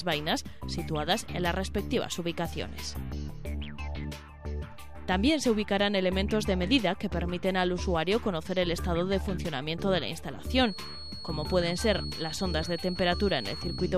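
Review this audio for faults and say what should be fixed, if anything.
From 10.44 s to the end there's a feedback whistle: a thin steady tone at 4.4 kHz, roughly 15 dB under the sound. It's likely a speaker-to-mic loop hovering just short of a full howl. Lower monitor gain or notch out 4.4 kHz.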